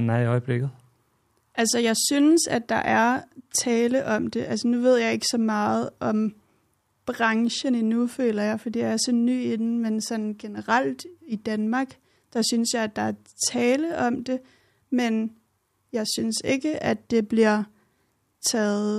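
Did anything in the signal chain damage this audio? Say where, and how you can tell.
No, nothing along the way seems to have hurt this speech recording; I can't hear anything pointing to damage at any stage of the chain.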